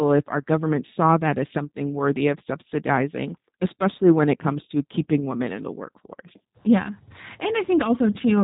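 From start to finish the speech carries G.729 codec damage, plainly audible. Each 10 ms frame is rebuilt from a vocal-tract filter, pitch predictor and a few pulses, which fits an 8 kbit/s stream. The result sounds rough and slightly synthetic, with nothing above 3.8 kHz.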